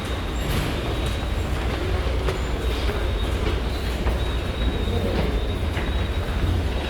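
At 2.93 s the quality drops suddenly and stays lower to the end, with no gap. This is an adaptive stream switching to a lower bitrate, consistent with Opus falling from 64 to 24 kbit/s, so codec artefacts rise.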